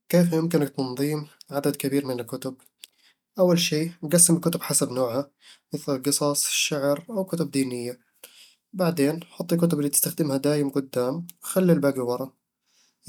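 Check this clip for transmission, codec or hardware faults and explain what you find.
Nothing wrong turns up anywhere in this speech recording.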